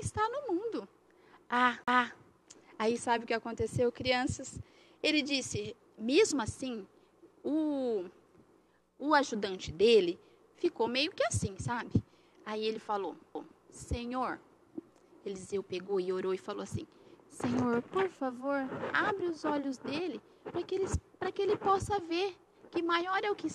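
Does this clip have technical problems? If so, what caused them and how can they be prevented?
Yes. CD skips occur at 1.84 s, with a mute of about 40 ms, and at 13.35 s, a near-instant dropout: the laser jumps tracks, so a tick and an abrupt resume from another point appear as a brief flat gap and discontinuity in the waveform and a vertical spectrogram seam. Prevent this by cleaning the disc and isolating the player from vibration.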